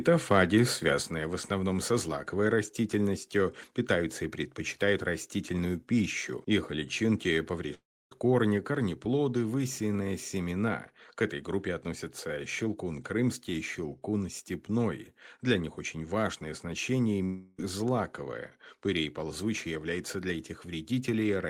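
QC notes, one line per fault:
7.74–8.12 s and 17.25–17.59 s, long network dropout, likely: the last sound smears into a fading buzz. The first gap falls to about 0.28 s of silence, the second never quite goes silent. Audio resumes with roughly a third of a second missing, not a brief click-length glitch.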